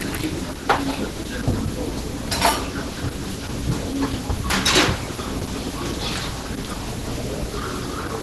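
From start to end the sound is muffled, hoarse and grainy, with heavy Opus compression as the likely cause. The encoder seems starved, near 12 kbps in hybrid mode. A spectrogram shows a flat ceiling at 12 kHz, with noisy texture beneath.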